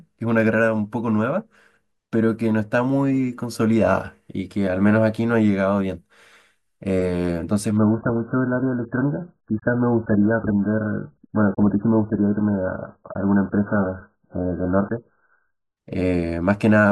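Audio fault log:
7.77 to 15.77 s, adaptive stream at a lower bitrate: the player switched to a much leaner version of the stream, which suggests the connection slowed, and held it for eight seconds before stepping back up. With so few bits to spend, the encoder discards the treble entirely. Nothing remains above 1.8 kHz, so the speech turns muffled and smeared with coding artefacts. Both changes in quality are abrupt and seamless, with no dropout at either switch, which fits an AAC stream falling to a very low bitrate.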